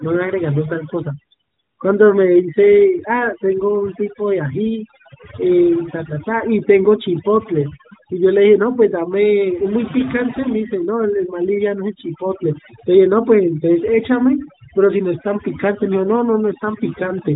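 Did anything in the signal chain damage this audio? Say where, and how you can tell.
Yes. Overdone noise removal in call processing throughout: the background drops and breaks up into twinkling specks, and quiet parts of the speech vanish along with the bands.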